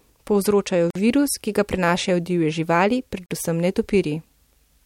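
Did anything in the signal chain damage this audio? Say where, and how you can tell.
Yes: a gap at a join of encoded pieces, at the codec stage. Untrimmed encoder delay and padding silence the speech for 50 ms at 0.90 s and 45 ms at 3.26 s, then it resumes.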